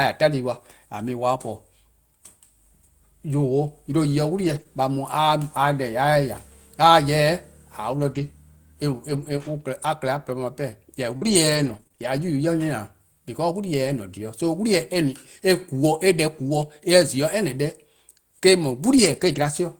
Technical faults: lost packet rebuilt from error correction; short concealed packet loss; scattered short gaps

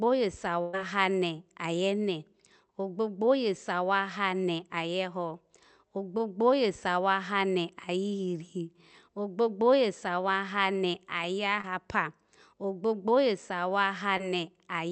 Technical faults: burst of packet loss; short concealed packet loss

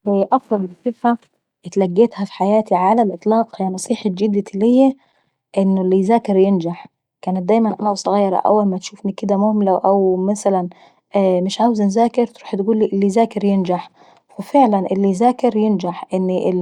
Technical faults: none

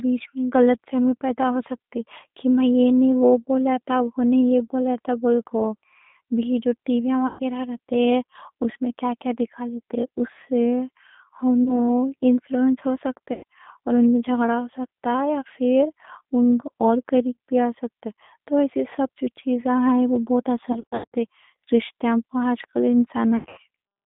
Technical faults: G.729 codec; VoIP packet loss concealed by the speech codec

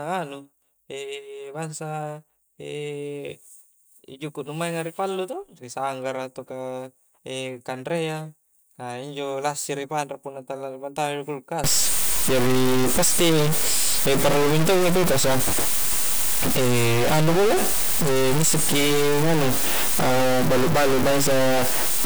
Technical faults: stuck bit

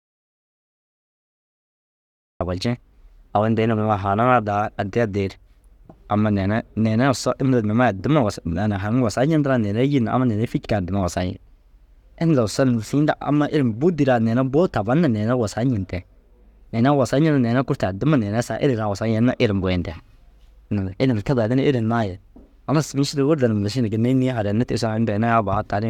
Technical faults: audio dropout to silence

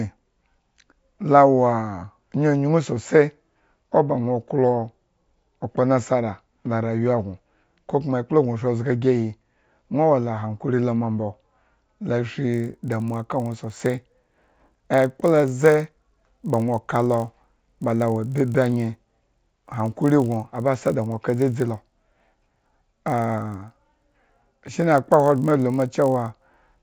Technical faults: resampler restarted on every block

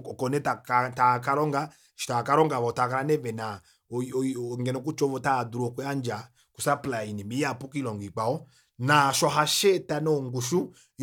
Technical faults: none

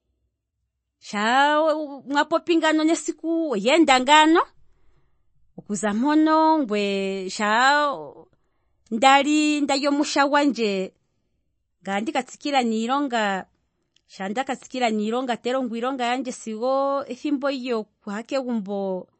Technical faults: MP3 compression

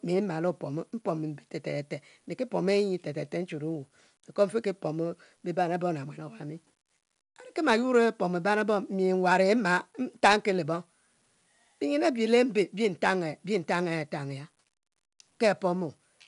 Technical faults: 4-bit ADPCM compression

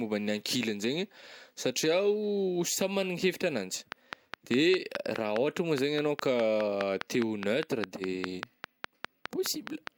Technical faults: train of clicks

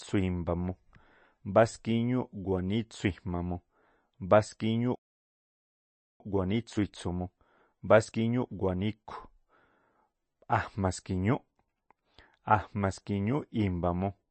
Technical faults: MP3 compression; playback stall; time-compressed catch-up

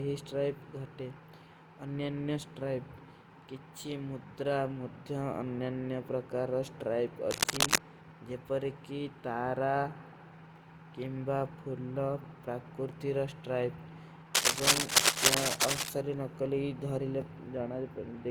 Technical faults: generation loss; cable scratch noise

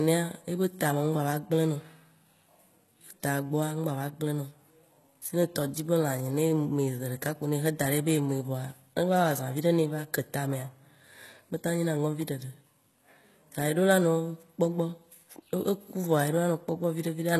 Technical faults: HE-AAC compression

